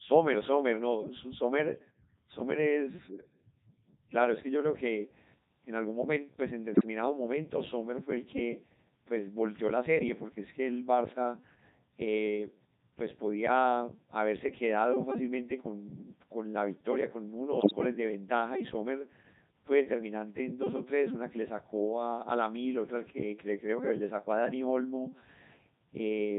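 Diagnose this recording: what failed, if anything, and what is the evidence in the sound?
The codec stage failed through the whole clip, which was carried by the Codec 2 vocoder. The speech sounds robotic and buzzy throughout, and the damage is heavy. The decoder rebuilds the voice from sine waves using only pitch, voicing, level and spectral shape. The sound fits its 3.2 kbit/s mode.

The radio link failed twice, with bit errors on digital voice radio. They occur from 6.72 to 6.86 s and from 17.60 to 17.72 s. In both bursts the voice lurches in pitch, level and tone, and warbles into gibberish. Flipped bits, a few percent, corrupt entire frames of parameters.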